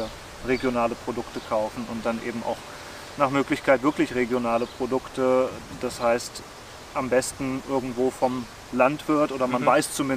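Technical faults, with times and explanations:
No technical faults can be heard anywhere in the clip.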